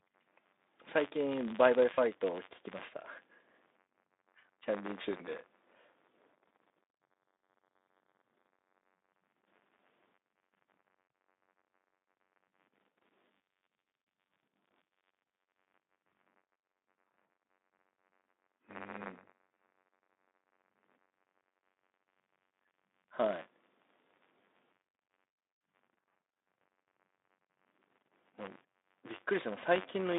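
A speech recording where the playback and hardware pointers of the output ring buffer have slipped and cross inside every period. This is buffer tearing: a small slice of each buffer, a few percent, replays audio from roughly 40 ms earlier with hard joins on both sides. The result is a steady robotic rattle at about 93.8 Hz, which fits a 512-sample buffer, heard throughout whenever the voice is present. Separately, VoIP packets went missing at 1.93–1.98 s (40 ms) and at 16.09 s (20 ms), and the Speex decoder's packet loss concealment stretched its last pitch and filter state with falling gain. Each gap comes out as a brief, fading smear of stretched sound, and the voice stays weak or distorted for a short while after real packets resume. The narrow telephone band of the Speex line is audible throughout.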